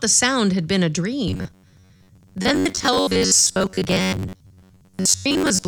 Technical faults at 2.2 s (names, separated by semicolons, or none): robotic sound from repeated short buffers